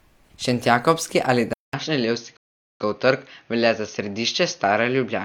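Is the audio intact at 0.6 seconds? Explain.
Yes, the speech at 0.6 s plays through cleanly, with no dropout, click, distortion or other fault at that moment.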